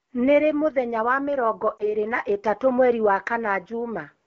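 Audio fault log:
1.78–1.94 s, lost AMR speech frame: brief warble and dip in the speech, as the decoder replaces what sounds like one missing 20 ms frame by reusing prior settings at lower gain.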